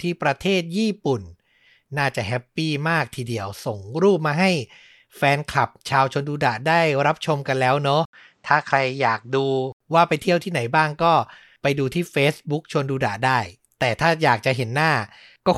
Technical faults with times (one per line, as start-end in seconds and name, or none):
8.05-9.80 input switched to a poorer device